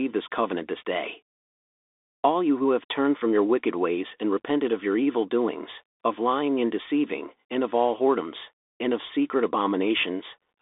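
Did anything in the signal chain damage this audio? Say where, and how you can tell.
Yes. The codec stage damaged it: the speech went through a Bluetooth CVSD headset codec, which fits a 64 kbps one-bit delta link. Throughout, the band sits between roughly 250 Hz and 3.6 kHz with nothing above 3.7 kHz, s sounds turn scratchy, and a granular hiss runs underneath as the adaptive step overshoots.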